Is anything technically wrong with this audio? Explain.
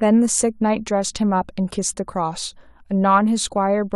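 No, no technical faults here.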